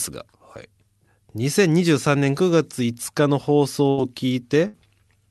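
A speech clip with two bursts of packet loss, at 3.89 to 3.99 s and 4.67 to 4.76 s. Each gap is concealed by a fading repeat of the preceding sound before the speech resumes further on, missing roughly 80 ms and 60 ms. On a spectrogram, smeared, decaying energy bridges each hole.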